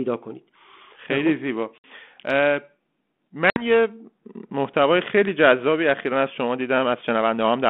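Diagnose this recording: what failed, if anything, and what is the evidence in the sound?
Packet loss on an ADPCM call, at the network stage: at 1.78 s and again at 3.5 s there's a hard 60 ms hole, a few packets' worth. Speech returns slightly distorted while the 32 kbit/s G.726 decoder's predictor and step size resync.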